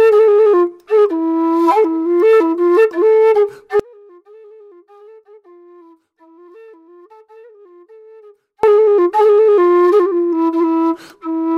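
Audio dropout to a faint residue from 3.80 to 8.63 s: the sound cuts abruptly for about 4.8 s, leaving only a faint leak roughly 30 dB down, likely a broken signal path that stayed live.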